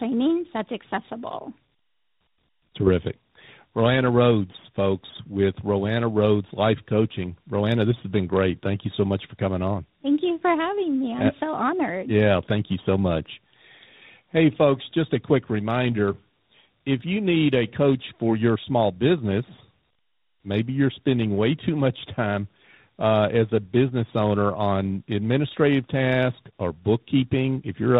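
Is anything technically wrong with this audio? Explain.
Yes, the speech shows tandem speech coding throughout. Two speech codecs in a row recompressed it, each degrading the last's output. It sounds rough, muffled and warbly, with nothing above 3.8 kHz.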